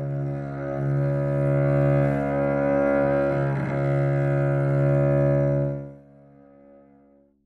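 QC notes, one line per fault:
5.63–6.04 s, zipper noise: a fast ticking, zipping texture rides on the sound as the level drops by roughly 20 dB, because the gain moves in coarse unsmoothed steps, about 150 per second, each leaving a small click in the signal.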